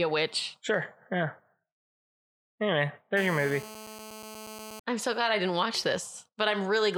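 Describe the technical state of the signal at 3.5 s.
A nearby 2G phone on a call is bursting its transmitter about 217 times a second, and the audio circuitry is rectifying those radio pulses into the signal. That produces GSM phone buzz from 3.17 to 4.80 s, covering the 3.5 s point: a hard, raspy 217 Hz buzz with a dense stack of harmonics, nearly steady, sitting about 15 dB below the speech and unrelated to it, clearing just before "I'm so glad I".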